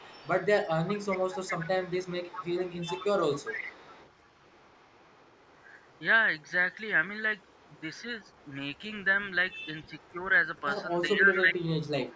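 A delayed copy of the speech trails about 0.41 s behind it from 0.0 to 6.77 s, roughly 15 dB down. It returns much fainter, near 35 dB below, from 7.39 to 10.61 s, and again at about 20 dB down from 11.33 s to the end. This is echo leak, likely from a far-end loudspeaker whose echo canceller let part of the pickup back into the call.

At 10.12 to 10.23 s the speech briefly sags by about 5 dB. From 11.15 to 11.73 s it dips harder, by around 15 dB, over roughly 0.4 s. Both are speech suppressed in double talk, likely the canceller ducking the talker while the other side was also speaking.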